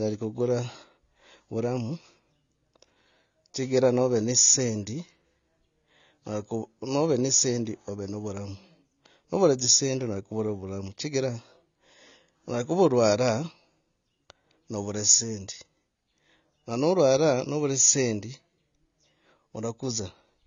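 From start to finish the speech carries plainly audible AAC compression damage, likely from a low-bitrate AAC-LC encode around 24 kbps. Nothing sounds above 7 kHz, so it is dull, with a warbly, fizzy texture on sibilants. A spectrogram shows a hard ceiling.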